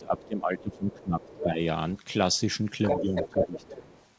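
A short stretch of speech with two related problems. From the start to 1.61 s, and again from 2.95 to 3.75 s, the talker's voice gets pushed down, by about 15 dB at its worst in the first stretch and about 10 dB in the second. That's speech suppressed in double talk: it's likely the echo canceller heard both ends at once, couldn't separate its own talker from the loudspeaker echo, and turned everything down. Alongside that, the other side's voice is leaking through. There are faint scraps at 0.22 to 0.27 s and 0.92 to 1.05 s, a clearer one at 1.23 to 1.46 s, and from 2.84 s to the end it's almost as loud as the talker. That's likely residual loudspeaker echo the canceller didn't fully remove from the mic. The call path itself has nothing above 8 kHz, which fits a G.722 wideband link.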